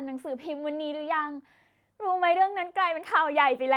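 No technical faults can be heard anywhere in the speech. Nothing in the recording calls for a time mark or an explanation.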